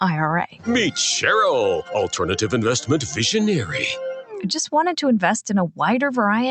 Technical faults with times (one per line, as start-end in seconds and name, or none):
0.00-6.50 noise suppressor applied to music or sounds
0.47-0.68 sound cut by the noise suppressor